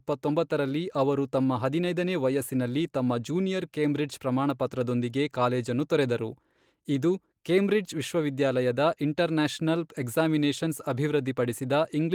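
No technical faults are audible.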